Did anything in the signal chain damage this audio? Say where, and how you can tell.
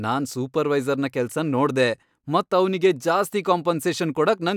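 No, nothing in the signal chain damaged this speech.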